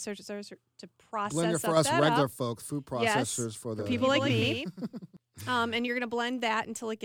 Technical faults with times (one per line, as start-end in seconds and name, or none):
3.79-5.17 doubled audio track